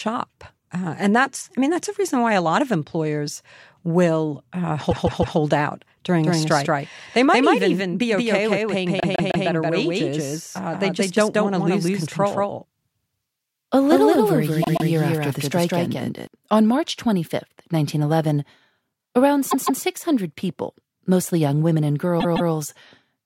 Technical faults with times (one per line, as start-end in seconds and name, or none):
4.90-5.37 repeated frames
6.24-16.27 doubled audio track
9.00-9.47 repeated frames
14.62-14.88 repeated frames
19.50-19.82 repeated frames
22.19-22.51 repeated frames